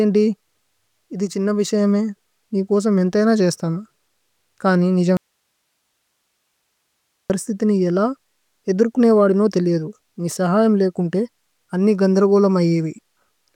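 Speech recording with an audio dropout to a faint residue from 5.17 s to 7.30 s, a gap of about 2.13 s. The speech cuts off abruptly rather than pausing or fading, and only low-level hiss remains, roughly 55 dB below the speech. It resumes just as suddenly at "നി യേല". The likely cause is the signal feed being interrupted while the downstream path stayed live, passing its own noise floor.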